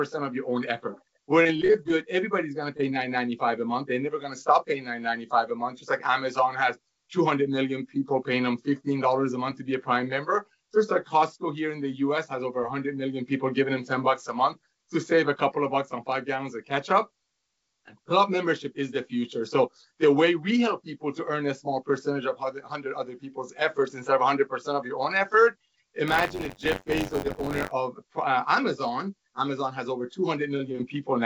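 Between 1.43 and 1.91 s the sound turns choppy, with small pieces dropping out in quick succession. This is repeated packet loss: a run of short gaps, none longer than about 20 ms and adding up to roughly 100 ms of missing audio, each patched by extending the preceding sound so that about a quarter of that half-second stretch is synthetic fill. At 2.78 s there is a brief smear or wobble, a short concealed packet loss where around 10 ms never arrived in time and the decoder bridged it by continuing the last sound before blending back into the real signal. From 26.07 to 27.71 s a steady rattling buzz near 94 Hz rides on the audio, present only while there is signal. That is buffer tearing: the writer and the hardware reader of the ring buffer have slipped so they cross inside each period, leaving a small slice of every buffer, roughly a tenth, filled with audio from about 40 ms earlier and hard-joined on both sides. 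The buzz rate fits a 512-sample buffer. The whole clip also carries the coding texture of a call path, with nothing above 8 kHz, consistent with a wideband codec such as G.722.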